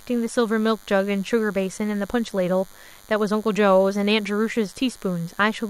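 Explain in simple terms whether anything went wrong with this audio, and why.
A faint, thin buzz runs under the speech for the whole clip. This is DECT cordless phone buzz: a nearby cordless phone or its base sends a radio burst 100 times a second, and the audio circuit turns each burst into a click. Unlike mains hum, which is smooth and low, this sounds harsh and raspy.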